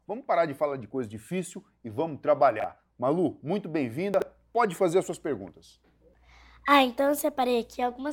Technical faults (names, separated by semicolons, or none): chunks out of order